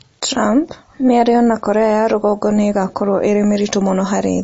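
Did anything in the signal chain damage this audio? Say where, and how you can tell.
Yes. The damage sits at the codec stage and runs through the whole speech clip: nothing survives above 7.6 kHz, and the sound has a watery, swirling quality with smeared consonant attacks. This is likely MP3 compression, at a bit budget that fits roughly 32 kbps. Short of bits, the encoder chops the treble at a fixed point and drops weak frequency lines that flicker between frames. A spectrogram would show a hard ceiling at 7.6 kHz and patchy, blinking holes below it.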